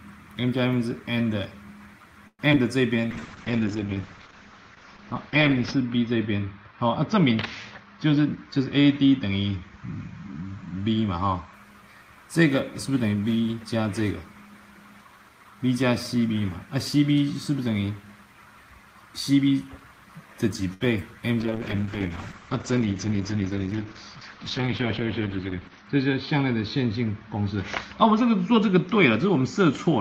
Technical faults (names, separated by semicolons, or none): repeated packet loss (robotic sound); jitter buffer slow-down; call bitrate drop; jitter buffer speed-up; short stall from a late packet; short concealed packet loss